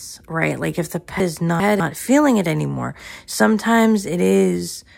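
From 1.2 to 1.8 s, the speech jumbles briefly. This is chunks out of order. One 200 ms chunk arrived two chunks late and plays after the audio that should follow it. Nothing is missing, but the sequence is scrambled. There are three hard joins.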